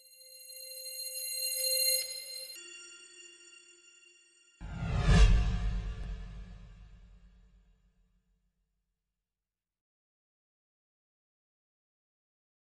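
From 2.56 s to the end, the sound drops suddenly to a deep, sluggish version of itself, running at about two-thirds speed and roughly seven semitones lower. This section at the wrong speed likely comes from playback or editing against a mismatched clock.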